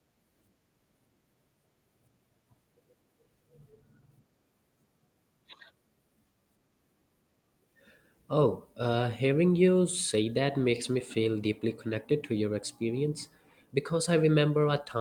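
No technical faults can be heard anywhere in the recording.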